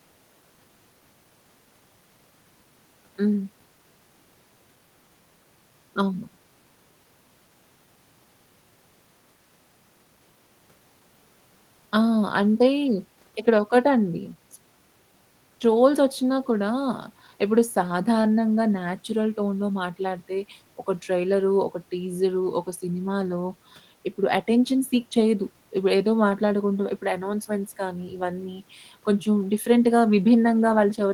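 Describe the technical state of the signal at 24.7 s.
At 24.7 s the speech signal is intact, with no technical fault at that point.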